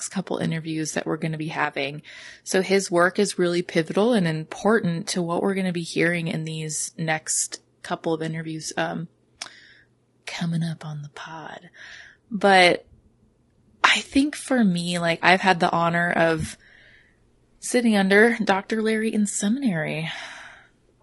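From start to finish the speech is rough and grainy, with noise between pitch harmonics and a thin, synthetic top band, consistent with roughly 32 kbps. The likely cause is low-delay AAC compression: short frames blur harmonics, rather than dulling the sound as band-limiting would.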